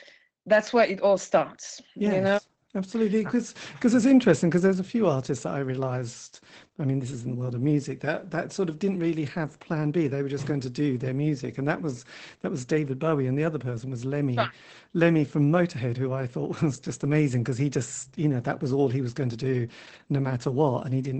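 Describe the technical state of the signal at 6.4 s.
At 6.4 s the speech carries Opus voice compression, present throughout the clip. The SILK linear-prediction coder runs in wideband, removing everything above about 8.7 kHz, and coarse excitation coding leaves a plainly muffled, hoarse and slightly robotic quality, consistent with roughly 12 kbps.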